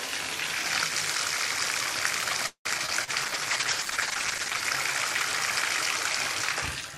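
At 2.47 s the sound stalls for about 0.2 s. It trails off as a fading buzz, then about 90 ms of silence, and resumes where it stopped. This is likely a call audio freeze, with delayed packets draining the jitter buffer.

At 2.77 s and again at 3.04 s there is short concealed packet loss. About 40 ms went missing each time. The receiver patched it by extending the previous sound, leaving a brief smear.

At 2.86 s playback will skip ahead. Roughly 70 ms is dropped, and the audio on either side is spliced together almost directly.

From 3.26 s to 4.70 s a call bitrate drop takes the encoder from 128 to 12 kbps. The sound turns muffled and watery, with the highs cut, until it recovers.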